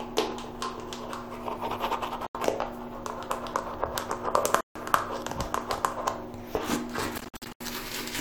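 A recording of sounds with three Bluetooth dropouts, where the audio cuts to silence and then picks up further along as if it never stopped. The first hole runs from 2.27 to 2.35 s, about 80 ms. The second, from 4.61 to 4.76 s, lasts about 150 ms. Around 7.18 to 7.61 s it stutters, with about 240 ms lost in short gaps of up to 80 ms. That pattern likely comes from packets reaching the headphones too late and being dropped.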